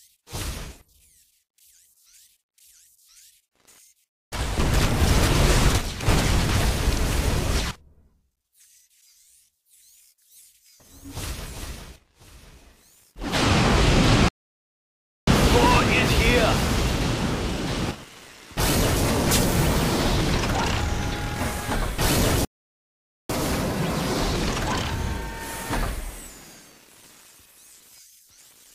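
At 14.28 s the sound cuts out for about 0.99 s, a playback stall, likely from the player running dry of data or its thread blocking; the waveform shows a flat gap. A second stall at 22.45 s silences the output for about 0.85 s, likely from the same cause, again a blank column on the spectrogram. After each stall comes catch-up at higher speed, from 15.27 to 18.27 s and from 23.30 to 26.30 s. The player resamples its backlog at 1.1 times normal speed, so tempo and pitch rise by about a semitone and a half before settling. On a spectrogram, harmonics shift upward and events crowd together.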